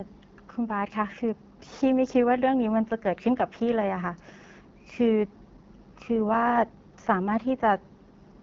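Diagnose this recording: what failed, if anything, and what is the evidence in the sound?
The codec stage failed: the speech carries plainly audible AMR wideband (HD Voice) codec damage from start to finish, with a rough, raspy texture and noise-like hiss above about 6.4 kHz. This roughness fits one of AMR-WB's two lowest modes, such as 8.85 kbit/s, where the pulse-excited vocal tract model lacks the bits to shape the voice cleanly.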